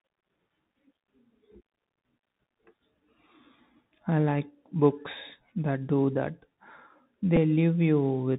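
Throughout, the speech sounds muffled and narrow, with scratchy s sounds and a granular hiss beneath it. This is the Bluetooth CVSD headset codec, which cuts everything above 4 kHz and encodes one up-or-down bit per sample, fitting a 64 kbps stream.

At 7.36 s a brief tick interrupts the speech. A Bluetooth headset packet was repeated: about 7.5 ms of audio was lost, which fits two lost packets, and the decoder replayed the previous packet's data instead.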